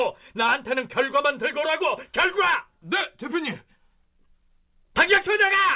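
Nothing is technically wrong with this speech clip, which comes through a G.711 mu-law call path with nothing above 4 kHz.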